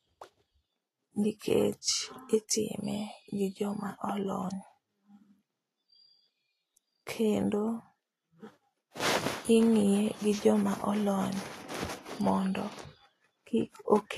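Throughout the speech, treble above 14.2 kHz is missing and the upper detail turns grainy and hissy, likely Vorbis compression at a low bitrate near 32 kbps, unlike steady broadband background hiss.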